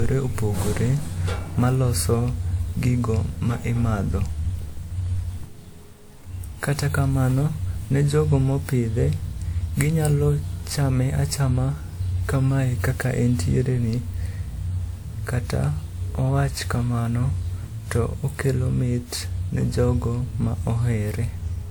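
From start to end, the speech carries generation loss. It sounds swirly and hollow, with smeared detail and blurred attacks on consonants. That is more damage than a single encode at this quality would leave. The likely cause is repeated lossy re-encoding, around five passes, each quantising on a shifted frame grid so the noise stacks up. The character points to a WMA chain near 96 kbit/s. Nothing is present above 20.1 kHz.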